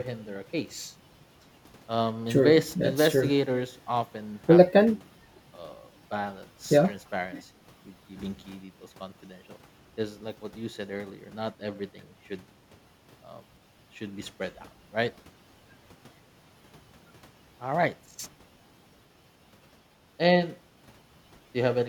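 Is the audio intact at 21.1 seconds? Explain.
Yes, at 21.1 seconds the speech plays through intact, with no dropout, click, distortion or other fault at that moment.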